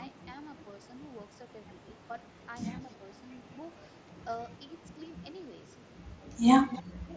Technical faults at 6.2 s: block size mismatch (truncated); concealed Bluetooth headset packet loss

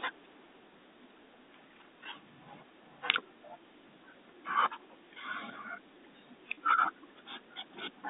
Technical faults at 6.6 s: packet loss with pitch repetition

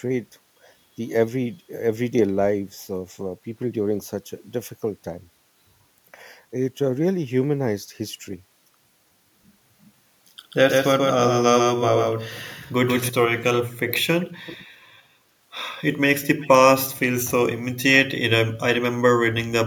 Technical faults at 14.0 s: echo leak

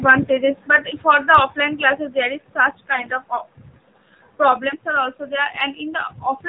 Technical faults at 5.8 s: AMR narrowband mobile codec

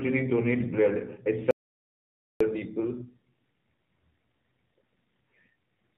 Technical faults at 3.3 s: AMR narrowband mobile codec

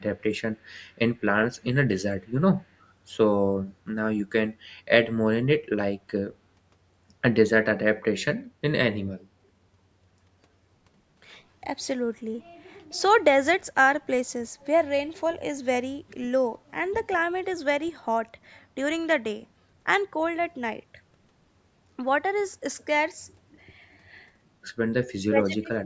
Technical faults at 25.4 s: speech suppressed in double talk

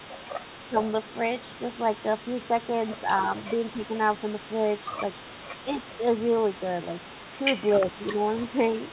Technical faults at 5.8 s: echo leak; speech suppressed in double talk

